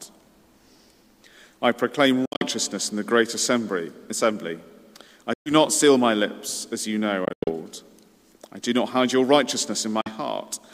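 The audio cuts to silence four times, at 2.25 to 2.45 s, 5.33 to 5.53 s, 7.25 to 7.51 s and 10.01 to 10.09 s, a pattern consistent with Bluetooth dropout, likely packets missing the wireless link. The first and third gaps are broken up rather than solid. Playback resumes further on, as though it had kept running. That skip-ahead, with no smeared or repeated fill, sets it apart from a stutter or concealment artefact.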